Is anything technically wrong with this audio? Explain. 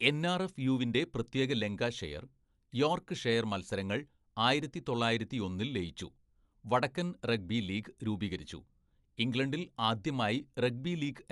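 Yes. The speech is damaged for the whole clip. It sounds dull, and nothing is present above 11.5 kHz. A rough, fluttering noise sits around the tonal parts. The damage is plainly audible. The likely cause is Dolby Digital compression, and the sound fits a bitrate of about 64 kbps. At such a rate the encoder trims the top of the band. It also leaves many frequency lines without mantissa bits. The decoder fills those gaps with dither noise, which causes the flutter.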